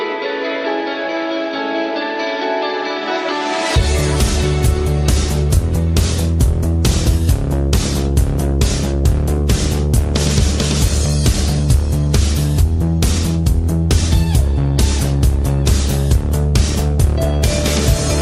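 From start to finish the audio sounds dull and gurgling, with a granular roughness and upper bands that flicker in and out, most likely MP2 compression at a low rate, around 80 kbps, where too few bits leave high sub-bands switched off and the rest coarsely quantised.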